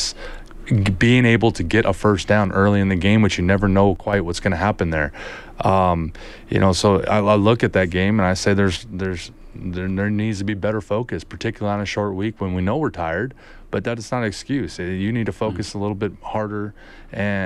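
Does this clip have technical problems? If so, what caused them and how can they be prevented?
Yes. The speech level abruptly drops by about 6 dB from 3.96 to 4.13 s, then again from 8.76 s to the end, likely one channel dropping out before the mono sum. Check stereo cables and connectors, and monitor both channels while recording.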